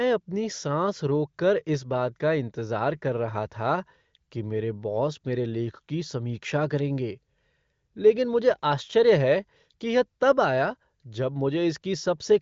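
Nothing stood out on listening, and the speech carries the ordinary wideband HD Voice bandwidth, with nothing above 7.6 kHz.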